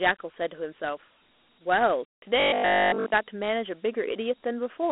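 Throughout, the speech carries Dialogic VOX ADPCM damage: coarse 4-bit coding, consistent with 8,000 samples a second, leaves a plainly audible gritty hiss trailing each syllable. A spectrogram shows an empty band above 3.9 kHz, with energy concentrated between 250 Hz and 3.4 kHz.

From 2.40 to 3.12 s, the speech turns into a rigid metallic buzz at 50 Hz: robotic sound, likely from repeated short buffers. A 20 ms stretch is replayed over the whole span, so the waveform shows an identical cycle and the spectrogram shows evenly spaced harmonics.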